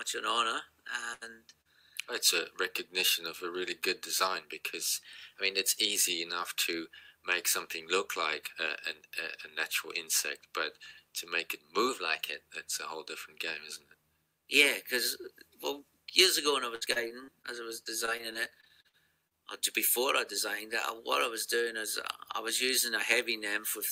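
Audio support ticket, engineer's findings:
Burst of packet loss, 1.13 to 1.23 s. Roughly 80 ms of audio missing, bridged by the receiver's concealment extending the last sound and fading it down. Heard as a held, decaying tail, then a jump ahead. Component: network path / jitter buffer.

Short concealed packet loss, 1.61 to 1.67 s. About 40 ms never reached the decoder in time. The gap was patched by continuing the preceding sound and blending back. Audible as a brief smear or wobble. Component: network / decoder concealment.

Drift correction step, 4.97 to 5.96 s and 11.89 to 12.42 s. Playback runs 5.67% fast, with pitch raised 95.5 cents (about a semitone). Likely cause: clock-matching resampler stepping its rate to correct buffer fill. Component: audio clock drift compensation.

Repeated packet loss (robotic sound), 16.75 to 17.46 s and 17.84 to 19.36 s. The first stretch has six dropouts totalling 200 ms, longest 61 ms, about a quarter of the span concealed. 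The second has twelve dropouts totalling 240 ms, longest 43 ms, 16% concealed. Each hole is filled by extending the last sound. Choppy result. Component: network path / jitter buffer.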